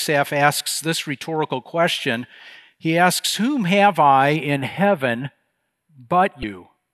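From 4.36 s, right after "have I", the speech turns thin and slightly hollow until the end at 6.94 s. That is channel delay causing comb filtering. One channel arrives a few samples late, roughly 0.07 ms, and the mono sum cancels near 7 kHz and higher.

At 6.40 to 6.43 s there is a brief glitch. This points to damaged data in a compressed stream. The decoder hit corrupted frames, lost sync, and jumped to the next valid frame header.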